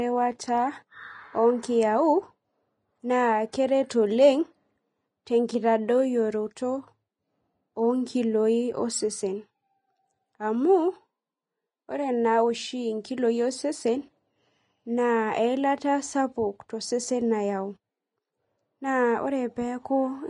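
Speech that's hissy and grainy all the way through, with nothing above 10.6 kHz, likely Vorbis compression at a low rate, which fits something around 28 kbps.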